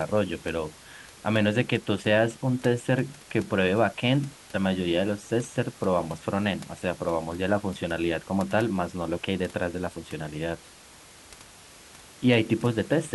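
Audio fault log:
No faults heard in this speech recording.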